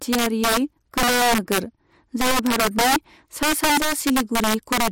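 Integer overflow runs through the whole speech clip: the signal is pushed about 7 dB past full scale, and roughly 7 percent of samples wrap to the opposite sign instead of being limited, producing violent cracks on loud syllables, far harsher than the flattened buzz of clipping.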